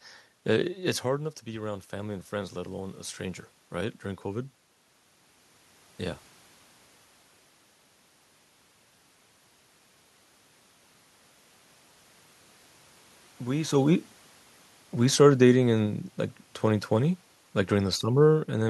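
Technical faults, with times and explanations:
1.06–4.6 s, automatic gain rising: voice and room noise swell together by about 6 dB as the gain control gradually compensates for an input about 9 dB quieter after the talker moved away.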